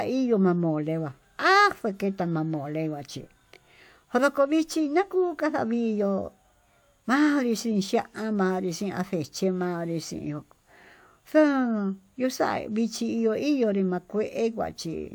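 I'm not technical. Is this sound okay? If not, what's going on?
Yes, nothing wrong can be heard in this speech recording.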